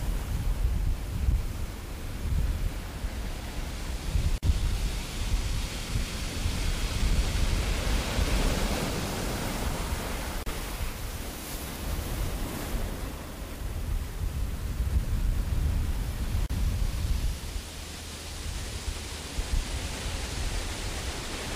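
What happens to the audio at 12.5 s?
Nothing goes wrong at 12.5 s; the audio plays through that moment intact, with no dropout, click or other fault.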